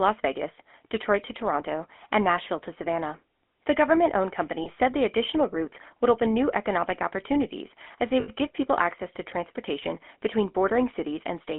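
Throughout, the speech carries the buzzy, gravelly texture of the GSM full-rate codec, plainly audible on every phrase. The codec models the vocal tract as a filter and excites it with a sparse, regularly spaced pulse train built from only a fraction of the original excitation samples, so fine voice detail is replaced by a coarse rasp. The sound is confined to a line band of roughly 250 Hz to 3.5 kHz, and its quality is consistent with a 13 kbps full-rate stream.

At 4.64 s to 4.69 s, lost GSM frames cause a short interruption. The decoder repeats the parameters of the last good frame, giving a brief metallic ring in place of the missing sound. At 8.2 s to 8.3 s a longer loss produces the same concealment. The repeated frame rings roughly, and the 80 ms gap fits about four consecutive missing 20 ms frames.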